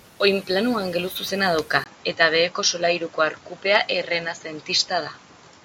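At 1.84 s, right after "angeluzuzena dauka", a 20 ms gap precedes a duller speech sound with nothing above 7.6 kHz, a faint new noise floor around 40 dB down, and an unchanged level. That new noise and tone distinguish a likely input switched to a poorer device from a simple low-pass filter.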